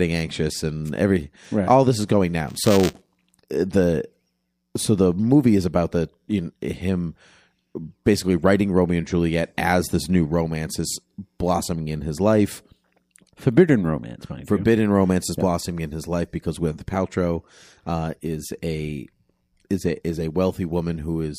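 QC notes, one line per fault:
2.47–3.40 s, buffer tearing: Just after "all this is going", the writing program and the hardware reading the ring buffer fall out of step and cross inside every period. A small sliver of each buffer is replayed from a lap earlier, around 15 ms old, with hard joins on both sides. Those splices repeat at 200 Hz, which fits a buffer period of 5 ms. The result is a steady robotic buzz riding on the speech.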